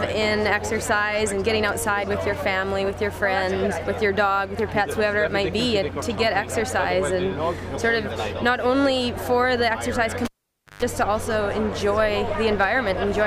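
At 10.25 s a cable is pulled and plugged in again while the signal path is live, and the audio returns at 10.83 s. A pop marks the break, followed by near silence for about 0.52 s. Then comes a short burst of 50 Hz mains buzz, lasting about 0.14 s, as the plug tip makes contact before the connector fully seats, and a second pop as the sound comes back. The two pops and the hum burst separate this from a digital dropout.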